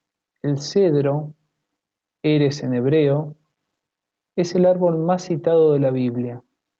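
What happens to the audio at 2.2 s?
Gain pumping runs throughout, including 2.2 s: background ducks about 5 dB under loud sounds and swells in gaps rather than gating off, likely from limiting excessive gain.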